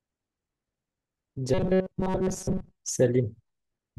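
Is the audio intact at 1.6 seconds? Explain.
No. At 1.6 s the speech is inside a stretch of robotic sound from repeated short buffers that runs from 1.54 to 2.76 s. It is likely caused by audio arriving too seldom, with the gaps filled by looping the last few milliseconds. That forces a rigid metallic buzz at 188 Hz, which fits a buffer of about 5 ms. Roughly 70% of the sound there is repeated material. Unlike dropouts or stutters, it still loosely tracks the speech.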